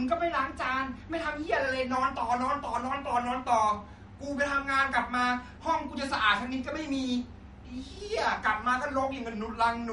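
Throughout the speech there is plainly audible MP3 compression damage, and the likely cause is a low bitrate, around 48 kbps judging by how heavily the encoder is starving the signal. Nothing survives above 11.2 kHz, so sibilants lose their sparkle and sound dull, while weak frequency lines flicker in and out between frames, giving a watery, swirling texture. On a spectrogram the content stops at a hard horizontal ceiling, with speckled holes in the upper bands.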